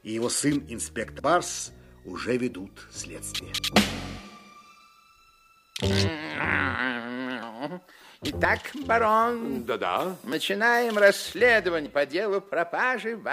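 Abrupt forward jumps at 1.2, 3.58, 6.4, 7.42, 8.45, 10.3 and 11.86 s point to a likely dropped buffer (overrun): unread audio was overwritten, losing about 150 ms at first and about a tenth of a second thereafter.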